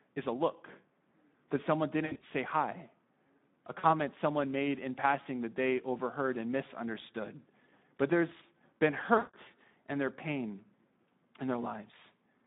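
Speex codec damage runs throughout: the speech sounds hoarse and noisy within a narrow 150 Hz to 3.7 kHz line band, which fits roughly an 11 kbps setting. VoIP packet loss concealed by the speech codec occurs at 2.05 to 2.23 s between "that someone" and "say hi", at 3.79 to 3.85 s before "someone made in passing", and at 9.17 to 9.35 s between "there's been" and "and their pain". Each gap is bridged by a fading smear of the last sound rather than silence.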